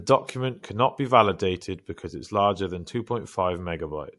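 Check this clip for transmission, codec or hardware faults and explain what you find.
There's one fault, running through the whole clip: what sounds like MP3 compression, plainly audible. Nothing gets through above about 11.3 kHz, and the speech has that watery, swirly texture from weak frequency lines flickering on and off. That's likely a starved MP3 encoder, consistent with roughly 54 kbps.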